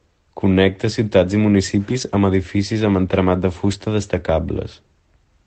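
From 1.89 to 2.03 s, after "ciutats i", and again from 3.71 to 3.73 s, after "edificis amb entramat de", there is a lost packet rebuilt from error correction: the missing audio was replaced by a low-bitrate backup copy carried in the following packet. The first patch spans about 80 ms, consistent with four separate packets, and the second about 20 ms. Each rebuilt stretch sounds briefly rougher and noisier than the surrounding Opus call audio, which is limited to 8 kHz. Unlike a dropout or a concealed gap, there is no silence, repetition or smearing.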